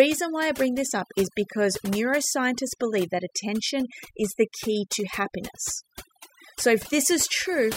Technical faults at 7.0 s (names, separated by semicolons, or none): overdone noise removal